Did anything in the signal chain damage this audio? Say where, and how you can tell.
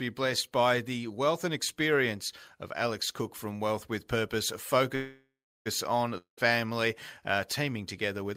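Yes. From 4.95 s to 5.68 s the speech stops and the last sound is stretched into a fading buzz that sinks into about 0.38 s of near-silence. When the speech resumes, it picks up exactly where it left off, with nothing skipped. This is a call audio freeze at the network and jitter-buffer stage. Packets were likely held up in transit, the buffer ran dry, and the receiver filled about 0.7 s, pushing everything after it 0.7 s later.

From 6.18 s to 6.53 s there is a similar fading tail of the last sound, lasting about 0.2 s, then about 0.13 s of silence. This time the speech comes back with a jump: roughly 0.2 s of it never plays. That missing stretch marks a long network dropout rather than a stall. Packets for that span likely never reached the receiver, so it concealed the gap and resumed further on.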